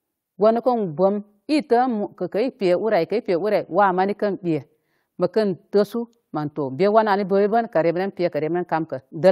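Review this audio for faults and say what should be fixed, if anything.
Nothing here needs fixing, as no faults turn up anywhere in this speech recording.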